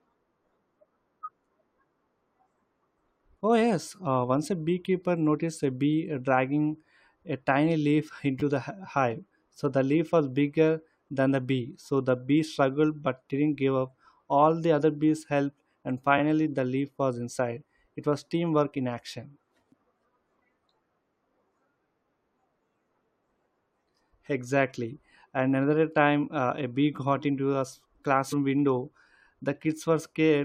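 At 8.40 to 8.42 s the speech has a repeated buffer: playback ran short of new audio and replayed the last 10 ms piece twice more, which fits a 10 ms buffer. It sounds like a quick buzzy click. The waveform shows identical 10 ms cycles with a sharp step at each join, and the spectrogram shows thin vertical lines.

At 19.72 s a brief glitch comes from damaged data in the compressed stream. The decoder misread corrupt frames, lost sync and resumed at the next valid header. On a spectrogram this appears as a short broadband smear, and on the waveform as a discontinuity.

At 26.96 s a second repeated buffer replays one 10 ms piece once, with nothing skipped. It is a single sharp click, seen as a duplicated cycle with a hard edge.

At 28.32 s a second burst of damaged data in the compressed stream gives a blip with the same smeared, misaligned look.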